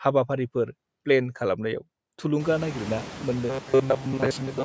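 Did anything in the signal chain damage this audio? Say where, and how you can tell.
Yes. Noise suppressor artifacts run through the whole clip, introduced at the call processing stage. Background noise drops by about 21 dB between phrases and swells back under the speech, leaving a residue that is easiest to hear once the room noise rises around two and a half seconds.

Robotic sound from repeated short buffers takes over from 3.50 s to the end, turning the speech into a rigid metallic buzz at 133 Hz. The likely cause is a starved driver buffer replaying its last 7.5 ms, matching that pitch, while most incoming audio is skipped.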